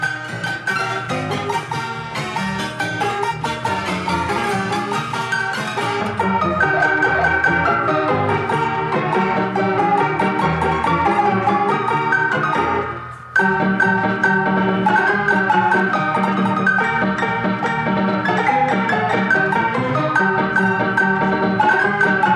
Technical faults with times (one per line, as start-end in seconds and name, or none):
none